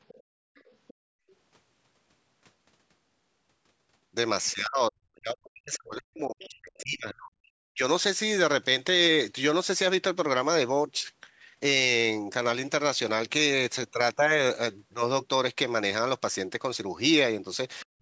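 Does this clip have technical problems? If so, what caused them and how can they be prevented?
Yes. The other side's voice leaking through shows up faintly at 0.08 to 0.23, 0.55 to 0.94, 1.28 to 1.35 and 6.39 to 6.83 s, roughly 25 to 35 dB under the speech. It's likely loudspeaker playback that the echo canceller didn't fully remove from the mic. A headset, or a lower speaker volume with the mic farther from it, would prevent it.

Background gated by the echo canceller hits at 0.23 to 0.55 and 0.94 to 1.28 s. The room tone drops by about 34 and 36 dB while the canceller clamps the mic, then comes back. A headset, or a gentler suppression setting, would stop those holes.

Speech suppressed in double talk runs from 4.52 to 7.82 s and again from 17.84 s to the end. The talker sinks by as much as roughly 40 dB, with the cause likely being both sides speaking at once so the canceller ducks everything. 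Headsets on both ends, or a canceller that handles double talk better, would help.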